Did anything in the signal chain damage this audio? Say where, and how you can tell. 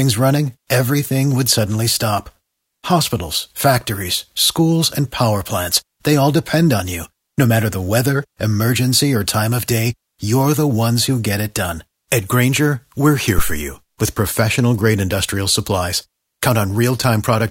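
Yes. A phantom power thump hits the analogue input stage at 13.38 s, just after "we're here". A deep thump peaks near about -4 dBFS and decays in roughly 69 ms, gone by 13.69 s before "with professional grade industrial". A supply switching on a live input pushed a step through the coupling capacitors.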